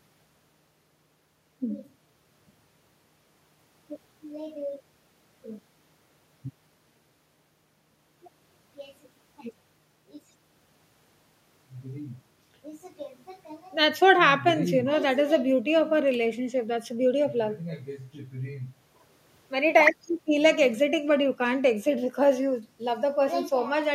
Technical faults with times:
none

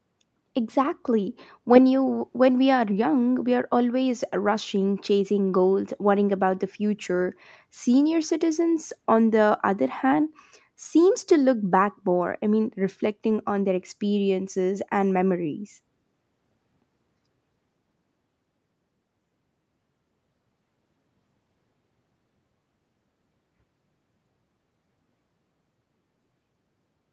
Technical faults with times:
none

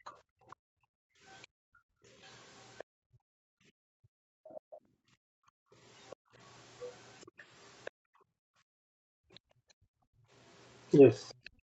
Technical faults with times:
0.03-6.33 background gated by the echo canceller
0.05-2.84 other side's voice leaking through
4.49-7.91 other side's voice leaking through
7.91-11.63 background gated by the echo canceller
10.95-11.50 other side's voice leaking through

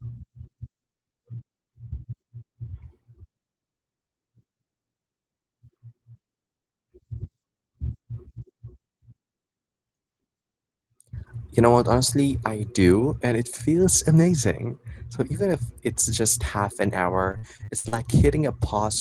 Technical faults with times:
17.31-17.94 repeated packet loss (robotic sound)

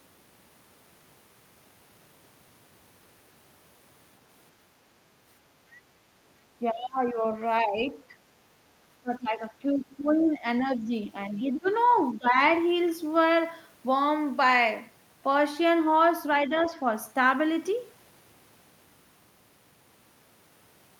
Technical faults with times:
6.60-7.23 speech suppressed in double talk
7.64-7.98 speech suppressed in double talk
9.01-11.68 speech suppressed in double talk
11.31-11.98 other side's voice leaking through
12.11-12.37 speech suppressed in double talk
16.47-16.72 speech suppressed in double talk

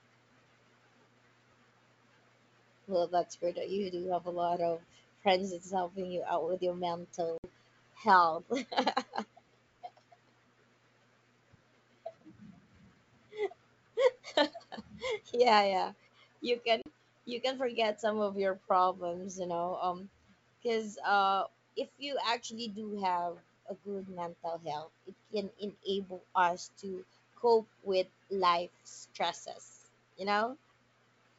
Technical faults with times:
7.38-7.45 packet loss on an ADPCM call
16.82-16.88 packet loss on an ADPCM call

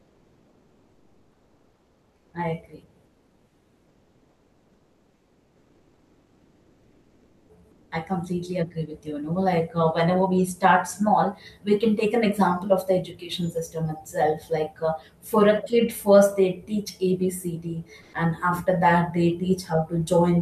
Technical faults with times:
0.00-2.33 comfort noise in place of the background
3.05-7.91 comfort noise in place of the background
18.01-18.13 comfort noise in place of the background

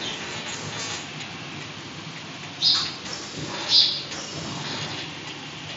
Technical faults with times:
none

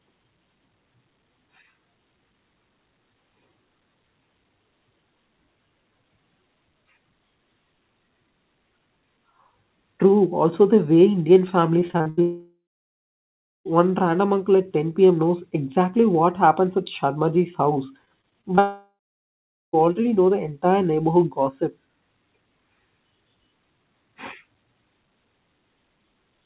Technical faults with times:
11.80-12.19 repeated packet loss (robotic sound)
12.21-13.67 long network dropout
18.05-18.59 repeated packet loss (robotic sound)
18.59-19.75 long network dropout

